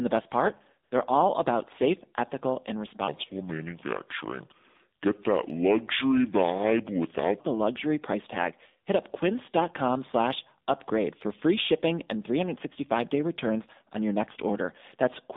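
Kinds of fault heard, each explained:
AMR narrowband mobile codec: Buzzy, synthetic speech confined to roughly 200 Hz to 3.7 kHz; the plainly audible coding damage points to AMR-NB at a low rate such as 7.4 kbps.
AMR comfort noise: Right after "the best part", an 80 ms smooth synthetic hiss replaces the real background, because the phone stopped sending speech frames and the receiver filled the gap.
section at the wrong speed: From 3.07 to 7.39 s the speech drops to a deep, slow drawl, about seven semitones low, likely from playback at 0.674 times the original speed.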